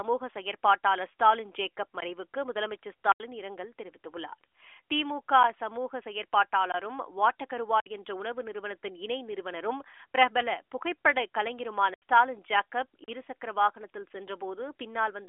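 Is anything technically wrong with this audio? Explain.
Yes: the speech, heard through a narrowband mobile channel with nothing above 3.6 kHz, has six blocks of digital silence. They fall at 2.00 s, 3.12–3.20 s, 6.72–6.74 s, 7.80–7.86 s, 11.94–12.02 s and 13.04–13.08 s, lasting 16 to 80 ms. In each block the sound cuts out abruptly to silence, the pattern left when an output buffer isn't filled in time. The longer blocks sound like holes. A waveform shows flat lines, and a spectrogram shows blank vertical strips.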